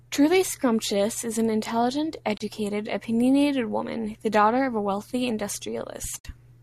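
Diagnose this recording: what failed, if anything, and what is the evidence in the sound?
The broadcast receiver twice lost or rejected frames and muted until valid ones returned, a digital broadcast dropout. The speech fades out within 8 ms into gaps of 24 ms at 2.37 s, after "is an intelligent", and 48 ms at 6.19 s, which fits one and two lost frames.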